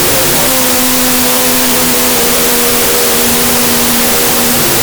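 A wrong sample width runs through the whole recording. Audio stored as 32-bit float is being read as 16-bit integers. Each float splits into two integers, so the sound plays at half speed and an octave low under loud, harsh noise. A plain sample-rate error would slow it cleanly, without that noise.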